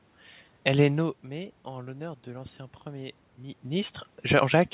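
Nothing stood out on listening to this speech clip.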